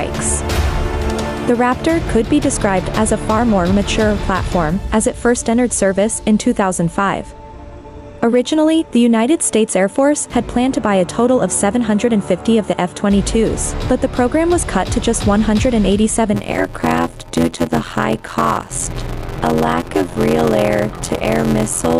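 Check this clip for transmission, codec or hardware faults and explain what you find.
One fault is present: a block size mismatch (padded) from 16.33 s to the end. A stage writes blocks shorter than the next stage reads, which fits a 512-sample read, so zeros pad each block. This adds an 86.1 Hz buzz and slows the audio to 0.625 speed with roughly unchanged timbre.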